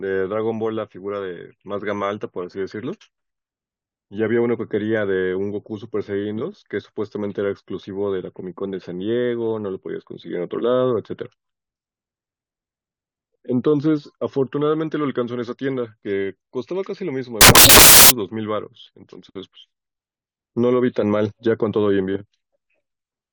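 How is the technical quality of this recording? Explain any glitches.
The recording has one clear glitch: from 17.41 to 18.10 s the speech turns into loud, harsh broadband noise. These are samples built from the wrong bytes. The reader misassembles each sample, so the fast-changing low bits become the large part of each value. Unlike clipping or crackle, it is a harsh, full-band noise.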